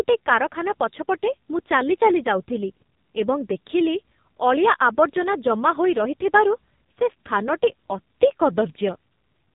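A speech clip carrying the AMR narrowband mobile codec from start to finish: the band stops dead at 4 kHz, and the voice is buzzy and synthetic, with heavy codec damage. That thin, pulse-driven texture, which sounds consistent with a low AMR-NB mode near 5.9 kbps, comes from rebuilding each 20 ms frame from a vocal-tract model and a few pulses. A simple telephone band-pass filter would be dull but clean, not artificial-sounding.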